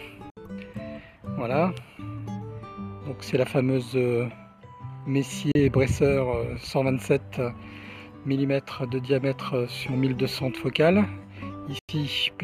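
The receiver briefly lost valid frames and muted, a digital broadcast dropout, at 0.30 to 0.37 s, 5.52 to 5.56 s and 11.79 to 11.89 s. Each hole opens with a 3 ms fade into silence. Gaps of 64, 32 and 96 ms fit whole lost frames of about 32 ms each, and the sound sent in them is gone.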